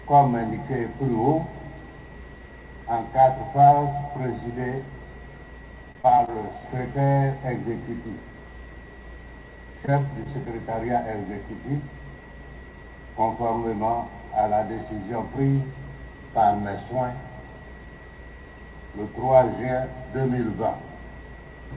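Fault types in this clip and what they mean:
Repeated packet loss (robotic sound): Between 5.92 and 7.09 s, about half a dozen holes of up to 30 ms are patched by continuing the previous sound, so the stretch turns choppy. On a spectrogram, brief smeared, over-regular patches below the 4 kHz ceiling interrupt the texture. The waveform shows repeated cycles where real detail should be.
Short concealed packet loss: At 9.86 to 9.89 s, roughly 20 ms of audio never arrived, and the receiver filled the gap by extending the last sound before blending back. It is heard as a quick smear or wobble. The waveform shows a short, too-regular segment, and the spectrogram a thin vertical seam.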